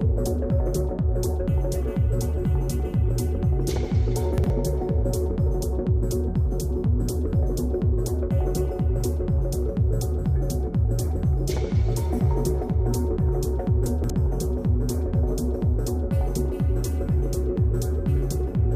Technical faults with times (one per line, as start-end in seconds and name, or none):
4.38-4.50 chunks out of order
13.86-14.10 chunks out of order